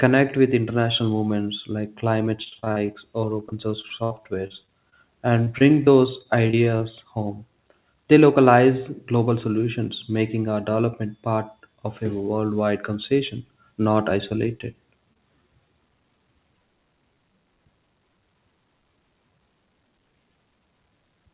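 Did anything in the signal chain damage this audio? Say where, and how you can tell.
Yes, the damage happened at the network and jitter-buffer stage. From 2.44 to 6.82 s, after "international movements like climate", there is repeated packet loss, heard as a robotic sound. Many short holes were patched by extending the last sound. The longest hole lasts 66 ms. About 13% of the stretch is concealed, so the sound turns choppy.

A jitter buffer speed-up runs from 11.37 to 11.77 s, between "solutions making our development" and "of a worldwide conversation". The buffer had built up excess delay, so the receiver cut tiny pitch-period slices, about 70 ms in total. Playback runs at 114% speed with the pitch unchanged, which sounds hurried.

Repeated stalls cause a stutter from 14.29 to 15.18 s, after "a worldwide conversation not". The buffer ran dry four times because packets arrived late. Each time it held the last sound briefly, with the longest stall at 27 ms. 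Nothing is lost, but the sound drags and hiccups.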